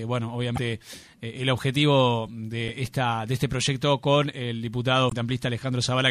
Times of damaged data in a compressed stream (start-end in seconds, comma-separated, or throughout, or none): 0.54-0.58, 2.65-2.70, 5.08-5.13